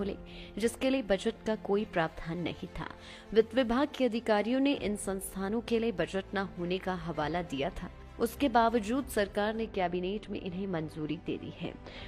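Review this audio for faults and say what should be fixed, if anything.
From 9.67 s to the end at 12.08 s, de-emphasis has been applied wrongly. A treble cut meant to undo pre-emphasis hits audio that never had it, or hits it twice. The top slopes away smoothly, about 11 dB down at 10 kHz against 1 kHz. The sound turns dull and muffled. Apply de-emphasis only once, and only to material that was pre-emphasised.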